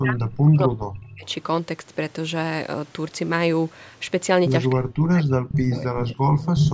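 A speech recording carries two faults typical of a hands-free call. From 0.01 to 1.27 s, and again from 4.73 s to the end, the talker's level drops in pieces by as much as roughly 35 dB. This is speech suppressed in double talk, most likely because the far side was talking at the same time and the echo canceller turned down this voice along with the echo it was trying to remove. On a waveform these stretches show the envelope caving in to near silence in chunks. On a spectrogram the harmonics fade or break off as vertical gaps, below an upper edge that stays flat at 8 kHz from the call's microphone processing. There is also echo leak at 5.49 to 5.77 s, 6.0 to 6.05 s and 6.58 to 6.71 s: a delayed copy of the voice arriving about 304 to 310 ms late, likely because the loudspeaker side's canceller did not fully remove what its microphone picked up. The copy is a little below the speech in the first burst, well below it in the second, and about as loud in the last. 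On a spectrogram the leak shows as short, smeared repeats of earlier harmonic patterns shifted about 0.3 s to the right.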